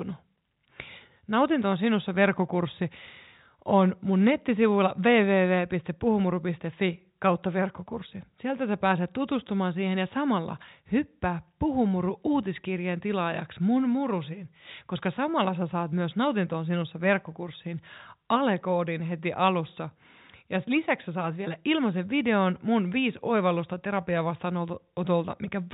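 No faults: the speech sits in the narrow telephone band that tops out at 4 kHz, which is simply the G.711 A-law coding path at work, and any trace of that coding is faint at most.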